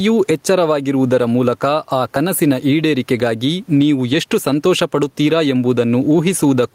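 Throughout the recording, gain pumping is heard. The input gain is likely set far too high, with a fast limiter clamping down on every loud syllable. The room noise sits about 43 dB below the speech, and the gain swings by around 10 dB, leaving the speech squashed.

At 2.16 s, between "ಎಚ್ಚರವಾಗಿರುವುದರ ಮೂಲಕ ಆ" and "ಈಡೇರಿಕೆಗಾಗಿ ನೀವು ಎಷ್ಟು ಸಂತೋಷಪಡುತ್ತೀರಾ", a dropped buffer (overrun) occurs. The recording software likely failed to read its samples before the hardware overwrote them. Around 20 ms of audio vanishes, heard as an abrupt skip forward.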